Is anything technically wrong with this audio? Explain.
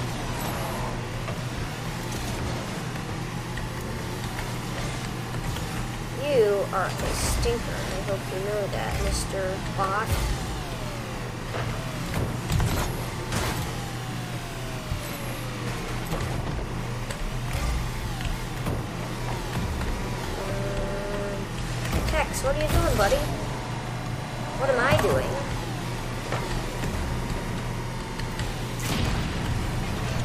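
Yes. Timecode bleed runs through the whole clip. Linear timecode from a neighbouring track or cable has leaked into the audio, and its square wave, flipping between pitches around 1 kHz and 2 kHz, sits roughly 15 dB below the wanted sound as a steady chirping warble. The flip pattern fits 24-frame-per-second code. On a spectrogram it shows as persistent stripes near 1 kHz and 2 kHz with odd harmonics, and on the waveform as a fine buzz riding the signal.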